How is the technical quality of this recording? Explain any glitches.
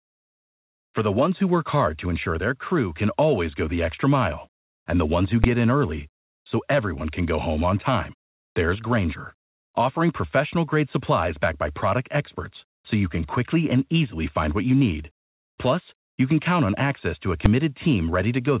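The recording has three glitches: two sharp bangs and one brief patch of substituted background noise. The speech is band-limited with nothing above 4 kHz, which fits a G.711 mu-law call path at 64 kbps.

At 5.44 s and again at 17.46 s there is a case of invalid numbers at full scale. Each time, a calculation produced infinite or invalid values for a block of about 5 ms, and those values were forced to one extreme. Because the block is so short, each one is heard as a single bang rather than two pops with silence between. On the waveform it looks like a narrow flat slab pinned far beyond the speech peaks. On a spectrogram it shows as a thin vertical stripe across the whole band.

From 8.28 to 8.56 s, a stretch of 280 ms, the background changes character. This is likely comfort noise in place of the background: the sender's voice detector judged the moment as non-speech and stopped transmitting, and the receiver filled the gap with synthetic noise shaped roughly like the real background. 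The real background sits about 73 dB below the loudest speech, and the filled section differs from it by about 15 dB. On a spectrogram the patch shows as a smooth, evenly textured block with sharp edges, lacking the fine irregular detail of the surrounding background noise.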